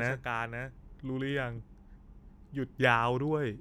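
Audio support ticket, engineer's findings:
Doubled audio track, 0.00 to 1.58 s, already present at clip start. Second full-band copy of the speech trails by about half a second, about 5 dB quieter. No decay or room colour. Stops abruptly at 1.58 s. Likely a duplicate capture path or misaligned edit.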